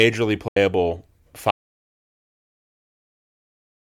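A speech recording in which the sound briefly vanishes at 0.48 s and returns at 0.57 s, picking up later as if it had kept playing through the hole, with about 80 ms lost. This is likely a Bluetooth dropout: packets missed their deadline at the headphones and were discarded, and the length of the gap fits roughly six lost packets. From 1.51 s the sound cuts out mid-flow into silence with no room tone, lasting to the end of the clip. That points to an audio dropout to silence, where the input was lost and the recorder kept writing silence.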